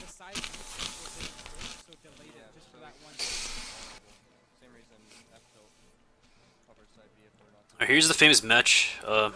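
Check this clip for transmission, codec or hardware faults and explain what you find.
Nothing to flag here; I can't hear anything going wrong in the transmission, coding or hardware at any point in the audio.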